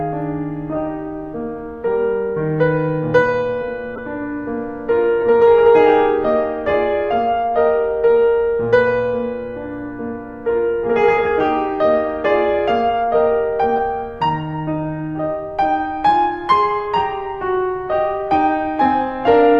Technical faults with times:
3.95-3.99 corrupt frame decoded
5.21 corrupt frame decoded
13.76 corrupt frame decoded

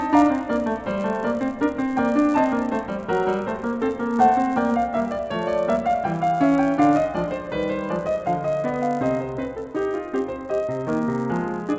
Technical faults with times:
0.00-11.78 resampler restarted on every block

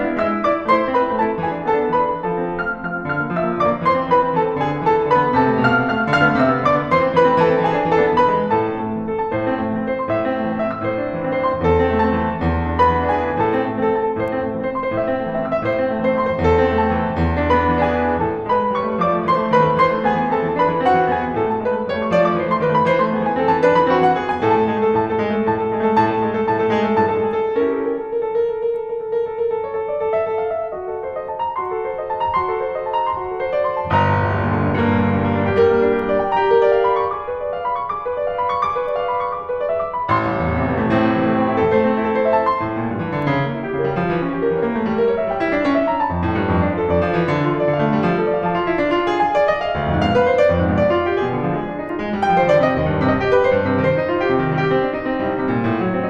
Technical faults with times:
41.28-42.97 crude rate conversion

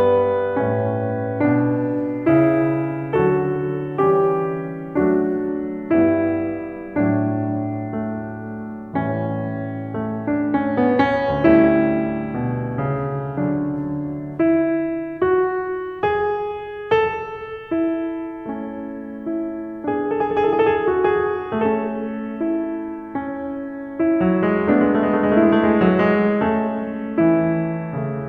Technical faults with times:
2.27-5.48 sample clock jitter

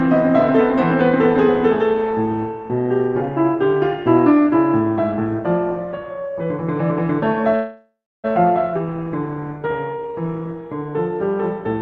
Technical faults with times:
7.55-8.26 call audio freeze
8.74-8.77 skip ahead
8.85-10.91 jitter buffer slow-down

